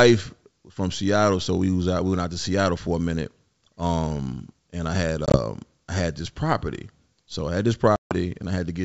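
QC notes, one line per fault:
5.26–5.39 s, packet loss on an ADPCM call. About 50 ms of sound drops to silence in short gaps spread over 80 ms. No gap is longer than 20 ms. The edges are hard. After each gap, the decoder's predictor and step size no longer match the sender's. So the sound comes back slightly distorted, then settles.
7.96–8.15 s, packet loss on an ADPCM call. A single 150 ms silent hole cuts through the wideband G.722 audio, which fits about fifteen lost packets. The decoder has lost track of the sender's state. The return is abrupt and briefly distorted before it recovers.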